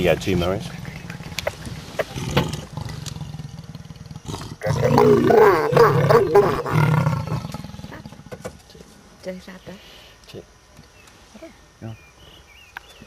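Three tiny clicks with a brief buzzy edge occur at 1.28, 2.84 and 6.56 s. These are repeated buffers: playback ran dry, so the device replayed its last 2.9 ms block two extra times. That block size fits a 128-sample buffer. Each event skips a few milliseconds of audio.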